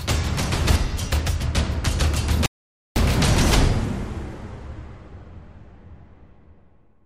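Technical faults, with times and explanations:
2.46 to 2.96 s, playback stall: the sound cuts off mid-flow and the output stays silent for about 0.5 s before the audio returns. The break is a clean drop to silence rather than a fade or a burst of noise, which points to playback being interrupted rather than the signal itself being damaged. The likely cause is the player's buffer running dry, or its output thread being held up, so nothing was delivered until it caught up.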